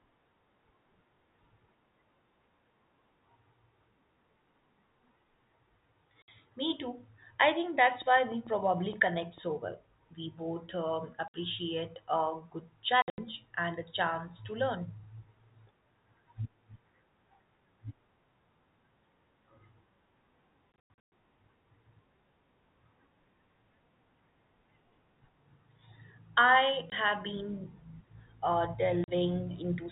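At 6.22 to 6.28 s the speech drops into dead silence for 60 ms, with hard edges. This is packet loss filled with silence: missing packets were replaced by nothing, and the gap length fits 20 ms packets.

From 8.02 to 9.39 s, just after "too I think", there is an evenly paced ticking of about ten similar pops at 6.6 per second, roughly as loud as the speech and present in the pauses too. This train of clicks is likely interference or a struggling interface injecting pulses.

The silent holes return at 11.28 to 11.34 s, after "both um", for 60 ms. At 13.02 to 13.18 s, 140 ms are lost in pieces, the longest run 80 ms. At 20.72 to 21.12 s, 300 ms are scattered over 400 ms, the longest run 120 ms. At 26.9 s there is a 20 ms dropout just before "have been", and at 29.04 to 29.08 s a 40 ms one. Each gap has the same abrupt edges, all in 20 ms steps. Throughout, the sound has the 4 kHz ceiling of G.711 telephone coding.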